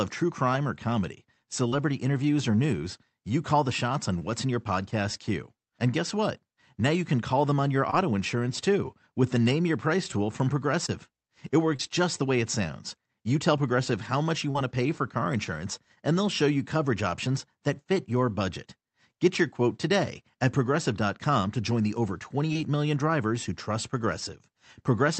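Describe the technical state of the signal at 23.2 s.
At 23.2 s the speech signal is intact, with no technical fault present at that moment.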